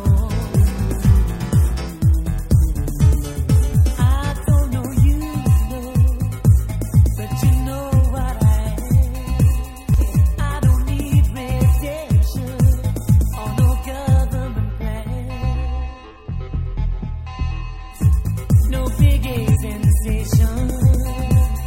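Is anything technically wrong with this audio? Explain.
Yes, there's damaged data in a compressed stream at 9.94–10.00 s and 19.51–19.57 s. Corrupted frames make the decoder lose sync and hunt for the next header, leaving brief glitches.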